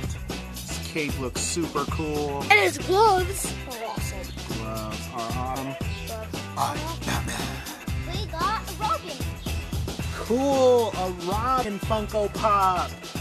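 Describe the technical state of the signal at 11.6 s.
Damaged data in a compressed stream at 11.64 s: corrupted frames there leave the decoder misreading them and hunting for the next valid header, producing a brief disruption.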